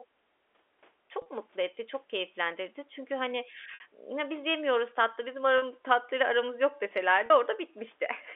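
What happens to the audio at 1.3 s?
Just before that point, from 1.22 to 1.26 s, the stream suffers packet loss with pitch repetition: about 40 ms of audio, which fits two 20 ms packets, goes missing and the receiver fills it by replaying the last pitch period, giving a brief held, buzzy tone right before "mutlu etti çok keyiflendirdi".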